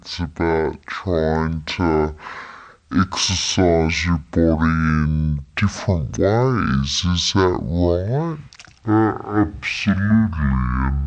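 Wrong sample rate, throughout the clip: the speech runs at half speed and sits a full octave, 12 semitones, below where it should. Speed and pitch fall together because the samples are being clocked out at half the rate they were captured at, with no conversion in between. A 2:1 mismatch like this fits 48 kHz material played as 24 kHz. Voices come out slow, deep and drawn out, with every pause stretched to double length.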